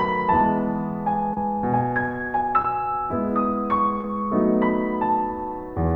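Short concealed packet loss occurs three times in this music: 1.33 to 1.37 s, 2.62 to 2.65 s, and 4.01 to 4.04 s. Audio arrived too late. The receiver extended the preceding sound for 29, 15 and 25 ms, then blended back. Each gap is a brief smear or wobble.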